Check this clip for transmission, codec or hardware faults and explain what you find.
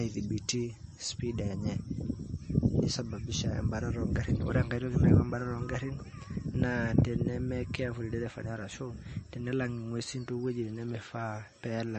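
One codec fault runs through the whole speech clip: the sound is watery and swirly, s sounds chirp metallically, and nothing survives above 8.3 kHz. That points to likely MP3 compression at a low bitrate, around 33 kbps, where the encoder drops the treble and switches weak frequency lines on and off between frames.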